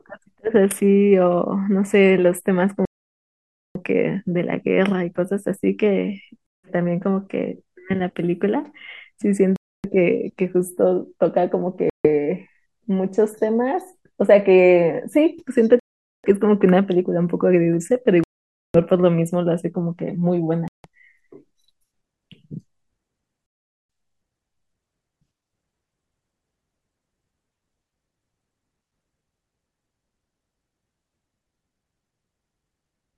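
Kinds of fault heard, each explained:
Bluetooth stall: the speech drops abruptly to silence eight times between about 2.9 and 23.5 s, with gaps of 150 to 900 ms, likely from interference delaying packets until the headphone buffer emptied. The waveform shows flat, hard-edged gaps; the spectrogram, blank columns across all frequencies.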